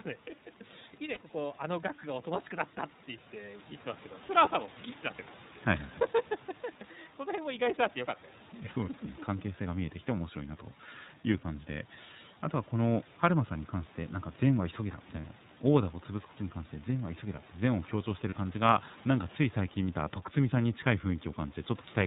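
The iLBC codec shapes the whole clip. Its damage is plainly audible. The speech is narrowband, with nothing above 4 kHz. The voice sounds a little rough and synthetic. The codec rebuilds each short frame's excitation on its own, without relying on the previous frame, and that costs naturalness. The sound fits 30 ms frames at roughly 13 kbps. Room noise sits about 21 dB below the speech and is coded along with it.

Lost iLBC frames cause brief gaps at 1.14 s, 15.21 s and 18.30 s. Each lasts about 30 ms, which fits a single missing frame. The decoder fills each hole by repeating the last pitch cycle mixed with noise. The result is a short held, slightly buzzy vowel. Each frame decodes independently, so the voice returns to normal right after each gap.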